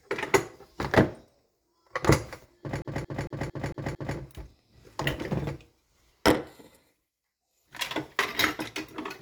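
From 2.82 to 4.18 s the sound sticks like a CD stuck on one turn. A scratch throws the laser back, repeating a 226 ms slice six times. Brief mutes make an even stutter.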